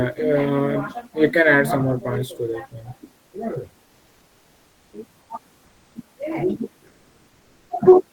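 From 3.85 to 4.93 s, the room noise, which sits about 40 dB under the speech, gives way to comfort noise in place of the background: a smooth, featureless hiss about 1 dB quieter. The likely cause is discontinuous transmission, which fits Opus DTX. The sender's voice detector judged the gap silent and stopped sending, and the receiver filled it with synthetic noise. The same swap comes back from 5.65 to 5.95 s, again about 1 dB down, and from 6.91 to 7.69 s, where the fill drops about 4 dB.

At the end of that first gap, from 4.90 to 4.93 s, you get an onset clipped by the voice detector. The speech comes back with a hard edge instead of a soft start, because about 30 ms of its beginning is missing. The likely cause is the detector reacting late when sound resumed, so those first moments were never sent and the comfort noise simply ran on over them.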